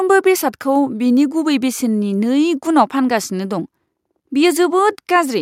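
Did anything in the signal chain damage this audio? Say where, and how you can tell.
No, nothing in the signal chain damaged this audio.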